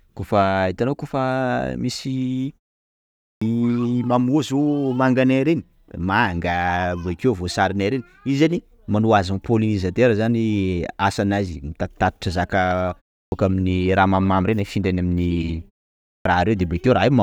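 At 3.34, 13.25 and 16.18 s there's a clipped start after a pause: the output device dozes off during the silences (0.83, 0.32 and 0.56 s) and wakes late, eating about 70 to 75 ms, so "aminy raha" and the others pop in abruptly.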